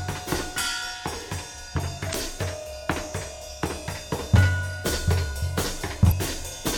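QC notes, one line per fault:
2.11–2.16 s and 6.08–6.12 s, damaged data in a compressed stream: corrupted frames break decoder sync while it hunts for the next header, leaving brief glitches in the music.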